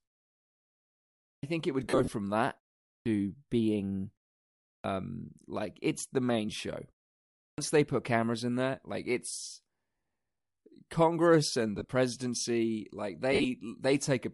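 Throughout, the speech has a breathy, grainy top end. Bluetooth LC3 compression at 48 kbps is the likely cause. At 1.33, 2.95, 4.73 and 7.47 s, speech starts abruptly with about 0.1 s missing. This is a clipped start after a pause: the output woke late from silence. The last one swallows the onset of "they put cameras in". Lost LE Audio frames occur after "think it" from 1.83 to 2.08 s, after "in there like it's" at 9.97 s, from 11.79 to 11.89 s, and from 13.33 to 13.45 s. The decoder filled each gap with reused spectrum.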